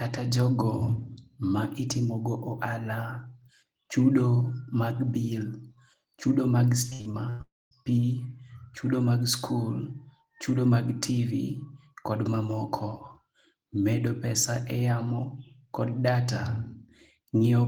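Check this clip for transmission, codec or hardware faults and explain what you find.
Two transmission faults occur back to back, both in the speech just after 6.9 s.

From 6.89 to 7.41 s there is repeated packet loss, giving a robotic sound. Five short holes open in quick succession, the longest about 100 ms. Each hole is bridged by stretching the last received sound forward. Roughly half of this half-second is patched rather than real, with about 240 ms of speech lost. The result is choppy, with pieces of speech missing.

From 7.41 to 7.73 s the speech stops entirely. A fading buzz continues the last sound briefly. Then about 210 ms of silence follows. About 300 ms of speech is gone and is not recovered when the audio resumes. The likely cause is a long network dropout. The receiver had nothing to play, so it extended the final fragment until it ran out.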